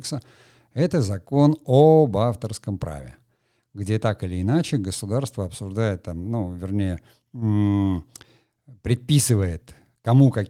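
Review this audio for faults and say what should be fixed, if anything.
No faults can be heard anywhere in the recording. There is nothing here that needs fixing.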